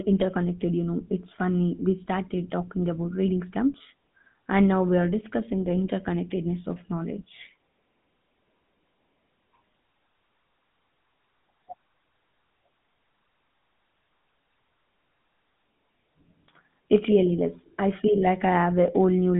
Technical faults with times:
0.00-19.39 GSM full-rate codec

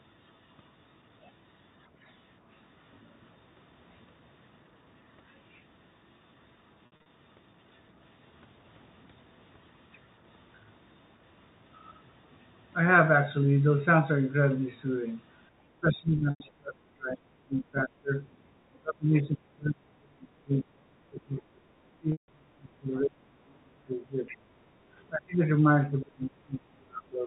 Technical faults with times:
2.02-2.26 other side's voice leaking through
6.86-7.06 packet loss with pitch repetition
15.81-18.12 speech suppressed in double talk
16.30-16.40 packet loss with pitch repetition
18.82-21.65 speech suppressed in double talk
22.00-24.29 speech suppressed in double talk
22.12-22.28 packet loss with pitch repetition
23.49-23.54 other side's voice leaking through
24.28-24.37 other side's voice leaking through
25.13-25.42 speech suppressed in double talk
25.68-27.27 speech suppressed in double talk

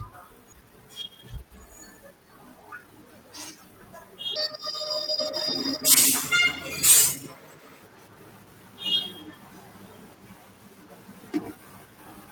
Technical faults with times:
0.52 skip ahead
0.61-2.11 jitter buffer speed-up
4.36-7.82 section at the wrong speed

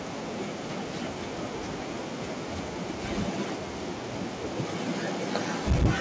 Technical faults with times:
5.67-5.86 microphone overload

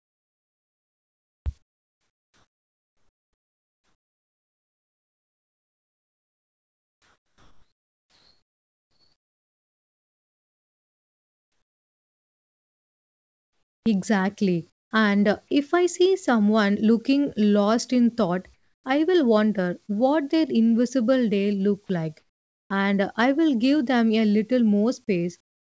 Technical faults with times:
0.00-13.86 comfort noise in place of the background
1.37-1.46 onset clipped by the voice detector
14.70-14.91 comfort noise in place of the background
18.54-18.84 comfort noise in place of the background
19.86-19.91 short concealed packet loss
22.19-22.70 comfort noise in place of the background
25.40-25.61 comfort noise in place of the background

